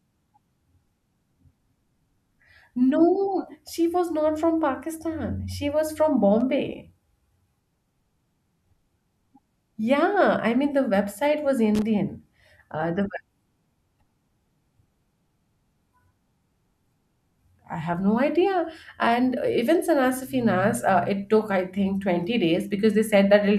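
A speech recording with loose connector crackle: brief irregular scratchy bursts at 6.40 s and from 11.75 to 11.82 s, where a worn contact intermittently breaks the signal path.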